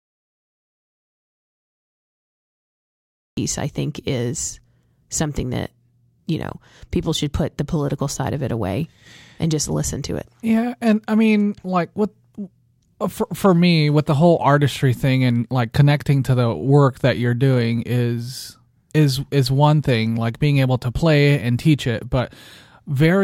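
From the very start until about 3.37 s there's dead silence, an audio dropout to silence that's already under way when the clip begins. There's no room tone at all in that stretch. The speech then comes in mid-flow with "I think is something", so whatever came before is gone. That points to the input being lost, likely through a disconnected device, a failed link or a stray mute, while the recorder kept writing silence.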